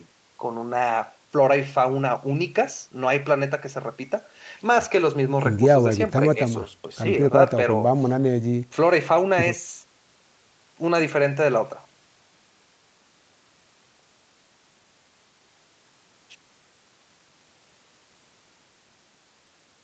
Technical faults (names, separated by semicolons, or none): none